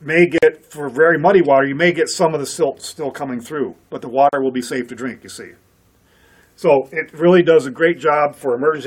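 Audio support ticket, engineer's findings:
Gap at a join of encoded pieces, 0.38–0.43 s (about 44 ms) and 4.29–4.33 s (about 38 ms). Symptom: short dropout to silence inside continuous sound, edges smeared, audio resumes where it broke off. Probable component: file concatenation step. Mechanism: segments encoded separately, then joined untrimmed. Each segment's encoder start delay and last-frame padding remain as silence at every join.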